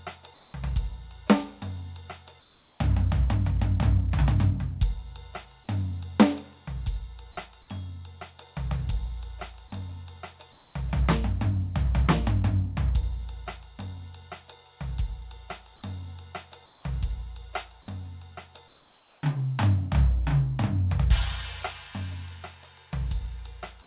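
The quiet background gets swapped for comfort noise at 0.34–0.54, 2.4–2.8, 10.52–10.74, 16.66–16.84 and 18.68–19.22 s: steady, featureless hiss in place of the real detail, up to about 2 dB quieter, likely from the sender pausing transmission between louder music. Nothing reaches above 4 kHz, which fits a narrowband call codec.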